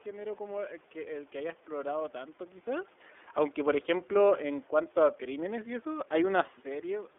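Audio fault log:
throughout, iLBC codec: The speech is confined to a narrow telephone band of roughly 300 Hz to 3.5 kHz, with nothing above it, so sibilants lose their edge and the voice sounds boxy. Each frame's excitation is coded on its own, without reference to the previous frame, which gives the plainly audible rough, slightly synthetic grain. The coarseness fits iLBC's 13.33 kbps mode with 30 ms frames.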